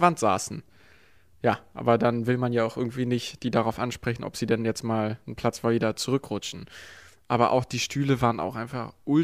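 No audible technical faults anywhere in the speech.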